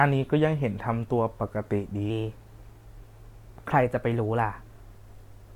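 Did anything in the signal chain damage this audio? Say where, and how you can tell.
Yes. A wrong sample rate at playback, from 2.10 to 4.81 s: the speech runs about 1.09 times fast and about 1.5 semitones high, consistent with 44.1 kHz material played at 48 kHz. On a spectrogram, harmonics and formants step upward there while syllables compress in time.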